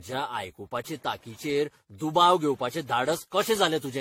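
Throughout the speech there is generation loss: a swirly, hollow smearing with blurred consonant onsets and nothing above 16.5 kHz. The cause is likely repeated lossy re-encoding, roughly ten passes of an AAC-type codec at around 64 kbit/s. Each pass requantised on a shifted frame grid, so noise piled up. A single encode at that rate would sound cleaner; this degree of smear points to accumulated passes.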